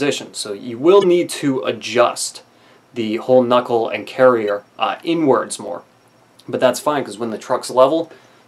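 The audio carries two kinds of fault. Damaged data in a compressed stream shows up briefly from 1.01 to 1.04 s and again at 4.48 s. In each case the decoder hit corrupted bytes it could not interpret, lost frame sync and skipped ahead until it found the next valid frame header. Two single sharp clicks follow at 5.68 s and 7.30 s, each a thin vertical line across the spectrum. These are likely dropped samples: a fraction of a millisecond of the waveform went missing, so the signal jumps abruptly from one value to a later one. The gap is far too short to remove any audible material, which is why each event is heard only as a click rather than a break in the sound.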